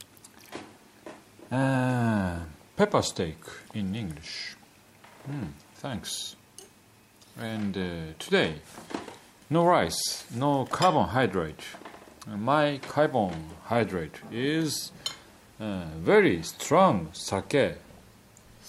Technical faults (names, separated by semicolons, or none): none